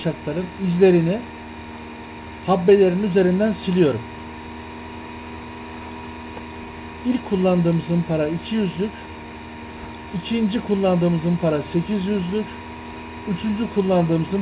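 No technical faults can be heard in the clip, and the audio has the narrowband character of a call path, with nothing above 4 kHz, which fits a 64 kbps G.711 A-law telephone codec.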